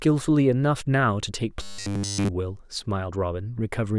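From 1.62 to 2.28 s the speech becomes a robotic sound from repeated short buffers, a fixed 100 Hz metallic buzz, likely from a 10 ms block looping throughout, unlike the gaps of dropouts.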